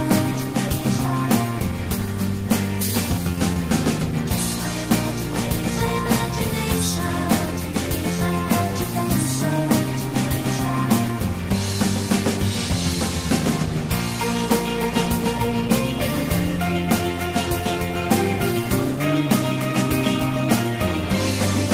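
Nothing stood out as a technical problem on listening to this recording.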